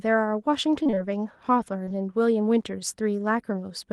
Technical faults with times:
0.83-0.99 repeated packet loss (robotic sound)
1.85-1.92 short concealed packet loss

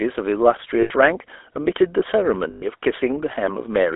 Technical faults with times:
0.00-3.96 GSM full-rate codec
0.80-0.91 lost GSM frames
2.50-2.65 lost GSM frames

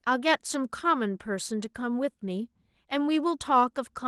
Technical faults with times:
none

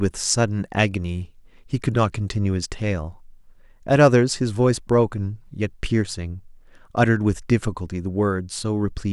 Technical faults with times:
none

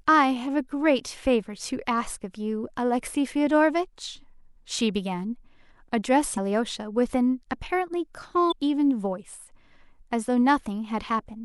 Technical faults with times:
6.34-6.38 damaged data in a compressed stream
8.48-8.53 damaged data in a compressed stream

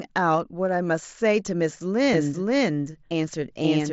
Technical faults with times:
2.13-3.93 doubled audio track

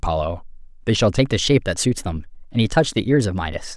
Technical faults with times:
1.19-3.76 wrong sample rate

